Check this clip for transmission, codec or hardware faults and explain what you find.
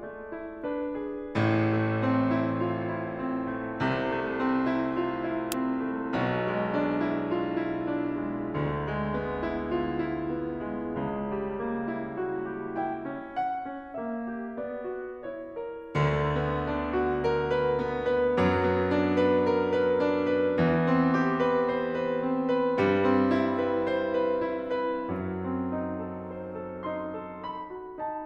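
No faults turn up when checking this music clip.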